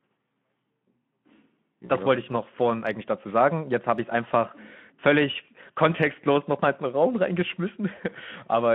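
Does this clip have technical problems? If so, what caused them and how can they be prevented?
Yes, there's VoIP packet loss concealed by the speech codec at 1.85 to 1.91 s and 7.95 to 8.00 s. The decoder stretches its last pitch and filter into a fading buzzy tone or coloured noise. Adding jitter buffering, forward error correction or a more reliable network path would prevent it.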